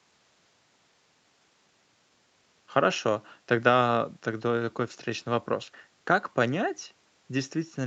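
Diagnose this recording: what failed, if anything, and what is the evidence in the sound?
Nothing in this recording has failed, and the speech holds no audible defect to diagnose. What can be heard is a call path working as intended, with the top end stopping at 8 kHz, which fits a wideband Opus setting behind the usual call microphone processing.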